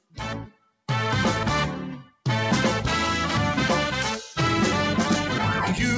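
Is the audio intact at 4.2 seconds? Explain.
Yes, the audio is intact at 4.2 seconds, with nothing there beyond the band limit of the call path, which leaves no content above 8 kHz.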